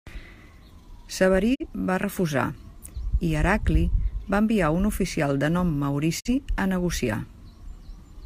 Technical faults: digital broadcast dropout

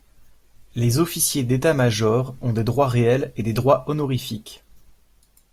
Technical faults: none

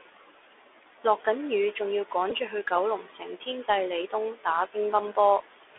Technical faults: Bluetooth CVSD headset codec; Bluetooth headset packet repeated

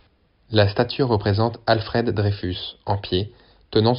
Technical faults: none

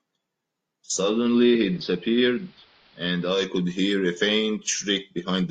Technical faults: digital radio blending to analogue

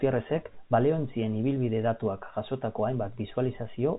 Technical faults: none

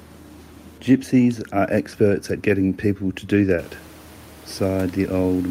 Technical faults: none

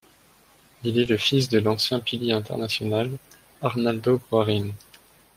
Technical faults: lost packet rebuilt from error correction

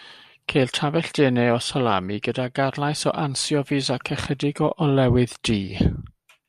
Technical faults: none

